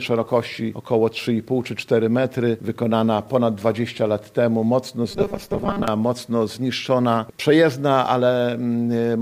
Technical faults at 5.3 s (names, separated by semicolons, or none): robotic sound from repeated short buffers